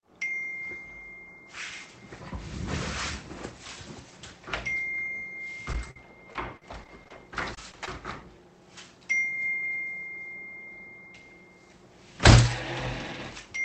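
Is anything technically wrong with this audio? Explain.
Yes. From 5.73 s to 7.88 s there is repeated packet loss (robotic sound): about a dozen short dropouts, the longest around 45 ms and roughly 220 ms in total. Each hole is filled by extending the preceding sound, so this stretch turns choppy, with fragments missing. The audio also passes through a call codec that limits the top end to about 8 kHz, which fits Opus at around 32 kbps.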